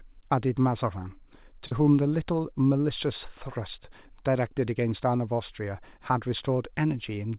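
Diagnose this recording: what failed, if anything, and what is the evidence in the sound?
A network-stage failure caused a short concealed packet loss: about 40 ms of audio, from 1.67 to 1.72 s, missed the jitter buffer's deadline and never reached the decoder. The receiver filled the gap by extending the preceding sound, its pitch for voiced sound and shaped noise for unvoiced, then crossfaded back into the real audio. This is heard as a brief smear or wobble in the speech, within narrowband audio that stops at 4 kHz, consistent with a G.711 call path.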